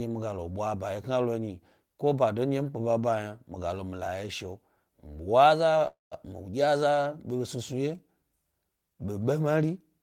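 A call audio freeze at 5.87 to 6.13 s interrupts this speech: the sound smears into a fading buzz, then about 160 ms of silence, before resuming where it stopped, likely from delayed packets draining the jitter buffer, adding roughly a 240 ms gap with nothing lost.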